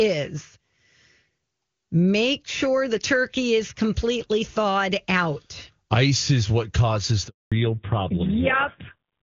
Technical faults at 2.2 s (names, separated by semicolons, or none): none